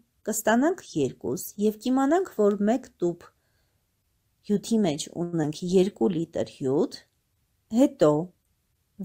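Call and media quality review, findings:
Short stall from a late packet, 5.23–5.35 s. Jitter buffer ran dry, so the last sound was held for 93 ms until the packet arrived, then resumed in place. Delay grew 93 ms. Spectrogram shows flat, frozen harmonic bands; waveform shows repeated, evenly cycling periods.

Short concealed packet loss, 5.43–5.45 s. Roughly 40 ms of audio never reached the decoder in time and was bridged with 5 ms of extrapolated sound before crossfading back. Brief smear or wobble, with delay cut by about 40 ms. Spectrogram shows a narrow seam; waveform shows a small splice discontinuity.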